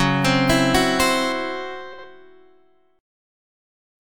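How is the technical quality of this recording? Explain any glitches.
The recording has two clear faults, and they overlap near the two-second mark.

From 1.32 to 3.32 s, de-emphasis was applied wrongly. A treble cut meant to reverse pre-emphasis hit audio that either had no pre-emphasis or had already been de-emphasized. Highs slope down smoothly, about 8 dB lower at 10 kHz than at 1 kHz. The sound turns dull and muffled.

From 1.93 to 2.04 s, frames play out of order. Two neighbouring blocks, each about 52 ms long, swapped places, which fits runs of two frames each. The short stretch plays with its halves exchanged. It sounds like a garbled flutter. No time is lost.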